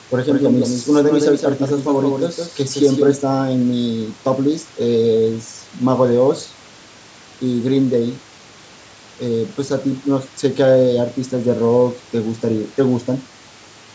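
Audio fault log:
0.00–3.16 s, doubled audio track: the speech is already echoed as the clip begins, with a clean, full-band second copy trailing around 150 ms behind and about 5 dB quieter. It has no room tail and stops abruptly at 3.16 s. The likely cause is a slower second capture path or an edit holding two out-of-step copies.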